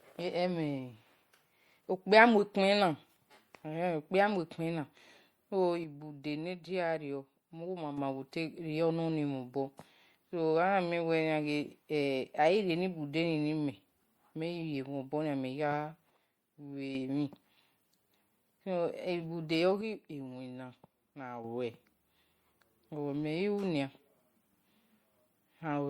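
Throughout the speech there is a watery, swirling texture, with s sounds breaking into metallic chirps and consonant attacks smeared. This is most likely MP3 compression at a starved bitrate, around 64 kbps judging by the damage, where weak frequency lines flicker on and off between frames. That frame-to-frame flicker sets it apart from plain low-pass filtering or broadband noise.

At 5.84 to 7.98 s, 16.10 to 16.95 s and 19.81 to 21.44 s, the level drops suddenly by about 6 dB and then snaps back. Each drop is the sign of one channel dropping out, likely a lost stereo channel, so only half the mono sum remains. Unlike a fade or a gain-riding dip, each step is instant, exactly halves the level, and holds flat until the channel returns.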